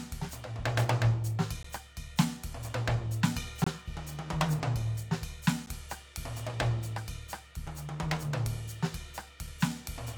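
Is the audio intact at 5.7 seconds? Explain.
No. At 5.66 s, just before the moment asked about, a gap between stream segments appears: the timestamps of two consecutive segments, which fit 2-second segments, leave a 10 ms hole. The player fills it with silence, so the music drops out abruptly with hard edges, though no audio is lost.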